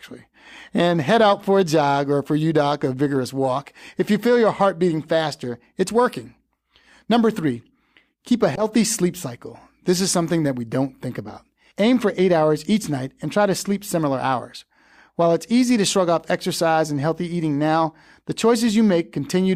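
The clip is speech with a corrupt frame decoded between 8.54 and 8.63 s. For roughly a tenth of a second, the sound is replaced by a brief artefact that does not belong to the voice. It reaches about -10 dBFS. Bits inside the compressed stream were damaged, and the decoder played those frames anyway. Misread gains or codes put energy at the wrong frequencies. The damage spans about three consecutive frames, which sets how long the artefact lasts.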